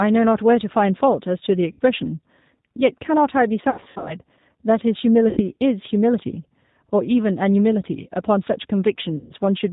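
G.729 codec, throughout the speech: at 8 kbit/s the decoder rebuilds each 10 ms frame from a vocal tract filter, a pitch predictor and a few pulses, so nothing above 4 kHz survives and the voice sounds plainly rough, thin and synthetic.

VoIP packet loss concealed by the speech codec, at 1.72 to 1.80 s (60 ms lost), 3.70 to 4.14 s (240 ms lost, scattered over 360 ms, longest run 80 ms), 5.29 to 5.41 s (80 ms) and 9.18 to 9.33 s (120 ms). Gap sizes fit 20 ms packets. The decoder stretches its last pitch and filter into a fading buzzy tone or coloured noise, and speech stays weak and distorted briefly afterwards.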